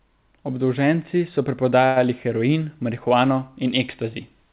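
At 1.86 s the speech stalls for about 0.1 s, until 1.98 s. This is a short stall from a late packet. The jitter buffer ran dry while waiting, so the receiver extended the last stretch of sound to fill roughly 99 ms, then resumed exactly where it had paused. Nothing is skipped. A sound is held too long, with a faint buzzy, slightly dipped quality, and everything after it arrives about 99 ms later. The band-limited audio, with no content above 4 kHz, fits a narrowband telephone codec such as G.711.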